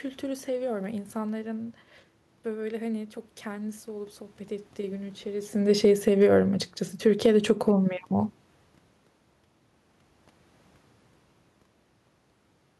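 From 5.58 to 6.24 s there is automatic gain falling: the gain control judged the input too loud or its background noise too strong and lowered it by about 3 dB, so speech and room noise sink together. The waveform envelope tapers, and the spectrogram's noise floor darkens too.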